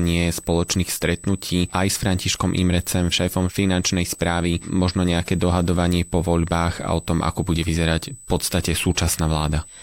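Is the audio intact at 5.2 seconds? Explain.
No. At 5.2 seconds, as throughout the clip, a USB whine sits under the speech: a steady 8 kHz tone about 20 dB below it. The bus's 125-microsecond microframe current draw leaks into the audio through power or ground, producing this fixed-pitch whine.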